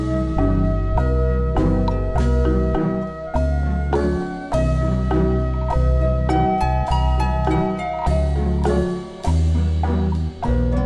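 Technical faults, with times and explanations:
throughout, wrong sample rate: the whole sound drags slow and sits low, running at 0.726 times normal speed and 5.55 semitones down, because the samples are played back slower than they were captured, which fits 44.1 kHz material played at 32 kHz without conversion.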